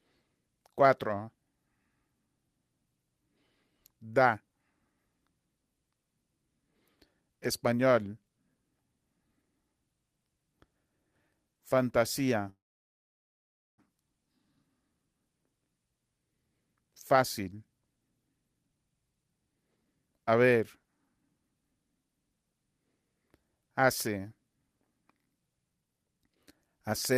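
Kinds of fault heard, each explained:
Call audio freeze: from 12.49 to 13.80 s the sound stalls into silence for about 1.3 s, likely from delayed packets emptying the jitter buffer, then resumes without loss.
Jitter buffer speed-up: at 18.54–20.32 s (112%) and 25.70–27.13 s (146%), the sound hurries at unchanged pitch as the receiver trims pitch periods to shed backlog.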